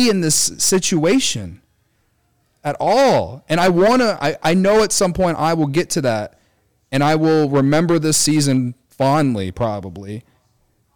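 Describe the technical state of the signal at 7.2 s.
Hard clipping is present at 7.2 s, as it is across the whole clip. The speech was driven about 10 dB past what the signal path could carry, so every peak beyond that ceiling is sliced flat, affecting around 7 percent of the samples. Those squared-off tops add harmonics high in the spectrum, heard here as a harsh, gritty fuzz riding on the louder syllables rather than isolated crackles.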